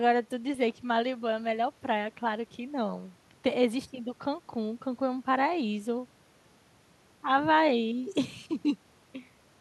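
No technical faults are audible anywhere in this speech.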